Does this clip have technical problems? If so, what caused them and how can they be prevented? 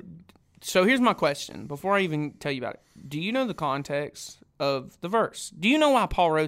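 No, nothing stood out as a technical problem on listening, so there is nothing here to trace to a cause or guard against.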